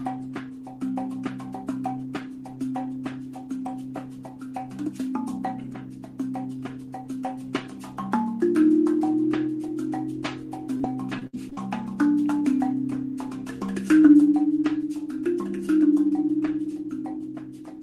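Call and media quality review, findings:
Repeated packet loss (robotic sound), 10.77–11.59 s. Choppy stretch with six dropouts, longest 60 ms. Jitter buffer or concealment extends the last sound over each hole, covering about a fifth of the span.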